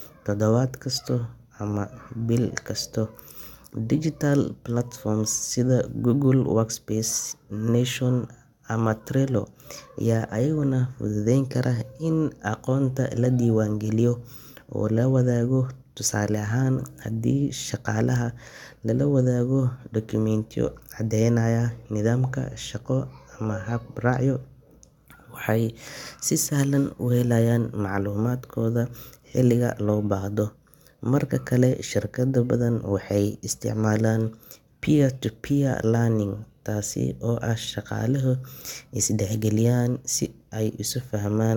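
Listening to this speech recording, nothing stood out as a technical problem at any point.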